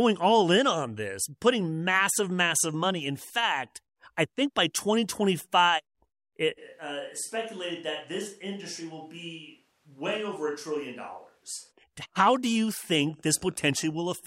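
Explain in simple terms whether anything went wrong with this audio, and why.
Switch to a distant microphone, 6.6 to 11.7 s: the speech abruptly turns hollow, roomy, quieter and noisier, likely because a farther microphone replaced the close one.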